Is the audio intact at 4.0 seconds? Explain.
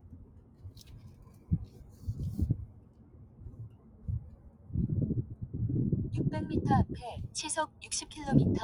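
No. From 3.69 to 4.04 s the sound is cut by the noise suppressor: it is treated as noise and dips by about 7 dB, with the drop tracking the sound rather than cutting everything evenly like a gain fault. Throughout the clip, a noise suppressor applied to sounds makes the level swing by roughly 15 dB, pumping steady parts down while attacks pass, unlike a compressor.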